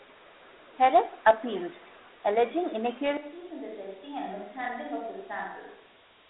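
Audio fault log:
Throughout: Dialogic VOX ADPCM. The speech sits in a narrow line band of about 250 Hz to 3.7 kHz, with nothing above 3.9 kHz, and a gritty hiss rides on every syllable. That grit follows the signal, unlike steady background noise. It points to 4-bit ADPCM at 8,000 samples a second (32 kbps).
3.17 s to end: switch to a distant microphone. The sound abruptly turns roomy and hollow, drops about 10 dB and loses bass, with room noise around 30 dB below the speech. The sudden onset marks this apart from a talker turning away, and the likely cause is a failed close microphone.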